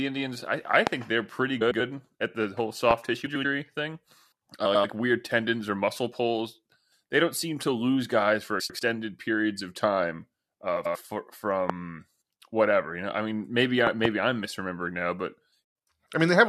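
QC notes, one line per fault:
0.87 s, 2.91 s, 11.70 s and 13.87 to 14.07 s, loud pop: A sharp pop sits on top of the speech, about 20 to 25 dB above it, and the last event is a double pop. The likely cause is a voltage pulse from a plug, switch or static. On the waveform, each appears as a tall narrow spike. On a spectrogram, it shows as a thin full-height vertical line.
1.61 to 1.80 s, 3.26 to 3.46 s, 4.65 to 4.85 s, 8.60 to 8.79 s and 10.76 to 10.96 s, frames out of order: In each stretch, two neighbouring blocks of about 93 ms are played in swapped order, so the speech briefly turns into a garbled flutter with no time lost. A spectrogram shows formant tracks breaking and jumping at the joins.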